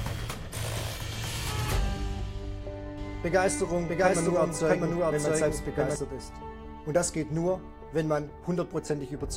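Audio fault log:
2.98–5.96 s, doubled audio track: a second copy of the signal was likely mixed in by a slower capture path or a misaligned edit, trailing the original by roughly 0.7 s at about the same level. The result is a hard, full-band repeat with no decay or room colouring, so everything in this span is heard twice, out of step. Both ends are abrupt: the copy cuts in at 2.98 s and drops out at 5.96 s rather than fading.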